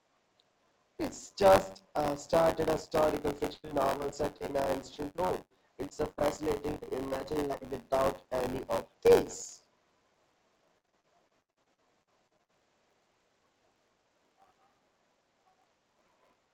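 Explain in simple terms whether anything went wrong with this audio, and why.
Yes, two things went wrong. Buffer tearing runs through the whole clip. The playback software and the sound hardware slipped out of step. Each small chunk of sound includes a sliver about 20 ms old. That causes a steady buzz near 94 Hz whenever speech is present, which fits a 512-sample buffer.

There is also repeated packet loss, which makes the sound robotic. It happens from 3.53 to 7.78 s and again from 10.78 to 12.51 s. Pieces of sound kept going missing. Each gap was patched by stretching the last sound. The speech turns choppy, and some of it is lost.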